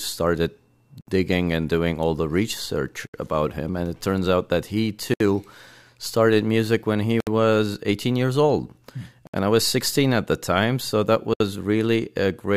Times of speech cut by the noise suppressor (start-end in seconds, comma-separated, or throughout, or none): none